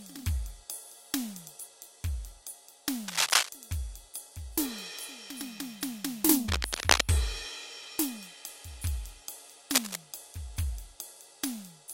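Cable scratch noise breaks over the music from 3.08 to 3.49 s, 6.46 to 7.02 s and 9.74 to 9.96 s, each burst a little louder than the music. The likely cause is a worn lead or connector whose contact resistance flickered as it moved. Unlike isolated clicks, these are dense, ragged rustles.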